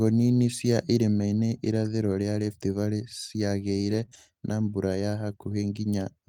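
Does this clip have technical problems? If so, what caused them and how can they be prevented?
Yes, there are two related network faults here, both from packets going missing on the way to the decoder.

Lost packets rebuilt from error correction: from 3.77 to 4.03 s, just before "na mbura ya", several packets went missing, but the next packet each time carried a low-bitrate backup copy. The decoder played those copies, so there's no gap, but about 140 ms of speech sounds rougher and grainier. It happens again with single 20 ms frames at 4.13 s and at 5.31 s, right after "na mbura ya". Raising the Opus FEC bitrate or fixing the loss on the network path would help.

Short concealed packet loss: between those repairs, at 4.05 to 4.09 s and 4.09 to 4.13 s, about 20 ms each went missing with no backup copy arriving in time. The receiver covered each hole by extending the last bit of sound, from its pitch if voiced and as shaped noise if not, then blended back into the real audio. 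It comes across as a quick smear or wobble. A larger jitter buffer and a steadier, less congested connection would prevent it.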